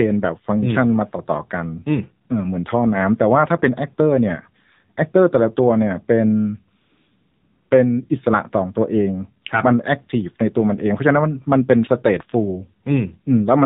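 A speech recording heard entirely through the AMR narrowband mobile codec, with damage that is plainly audible. Nothing reaches above 4 kHz, and the voice has a buzzy, synthetic edge, which fits a low AMR-NB mode such as 7.4 kbps. A simple telephone-band filter would dull the top end but leave the voice natural. Here the vocal-tract model and its sparse pulse excitation audibly rebuild the speech. From 6.82 to 7.70 s, about 880 ms, AMR comfort noise takes over. The sender stopped transmitting speech frames and the receiver filled the gap with smooth, steady synthetic noise that cuts in and out abruptly. This differs from a dropout, which would leave digital silence, and from packet-loss concealment, which would repeat or smear the preceding sound. Instead the real background is replaced by an even, featureless hiss.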